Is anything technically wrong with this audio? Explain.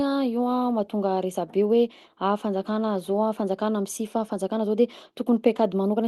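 No, nothing is technically wrong with this audio.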